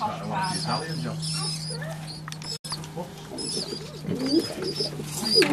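At 2.56 s a digital broadcast dropout fades out in 8 ms and leaves silence until 2.65 s, a flat waveform and blank spectrogram column fitting three lost frames.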